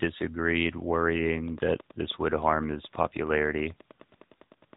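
From start to end the speech carries the sound of the AMR narrowband mobile codec. Nothing above about 3.8 kHz survives, so sibilants and air are gone. The vocal-tract model rebuilds each frame from sparse pulses, giving a plainly audible buzzy, synthetic edge that fits roughly a 10.2 kbps mode.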